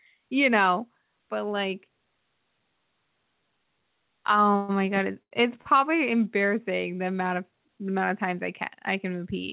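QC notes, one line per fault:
4.52–4.56 s, short stall from a late packet: the speech holds on one sound for about 20 ms before moving on. A packet arrived late, the jitter buffer ran dry, and the receiver stretched the last sound until it came, then resumed at the same point with nothing lost.
4.56–4.71 s, call audio freeze: straight after that stall, the sound carries on for another 125 ms as a fading buzz or hiss with no true silence, then the speech picks up where it stopped. The likely cause is a longer hold-up of packets in transit that left the jitter buffer empty, so the receiver filled the wait with synthetic sound. The result is a gap inserted into the speech, but nothing drops out.
5.23–5.33 s and 5.61–5.67 s, short stall from a late packet: two more held sounds, about 87 ms and then 37 ms, each with a slight buzz or dip. Each one is again a late packet draining the jitter buffer. 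The receiver stretched the preceding sound, then continued without skipping anything, against the narrowband call sound that has nothing above 4 kHz.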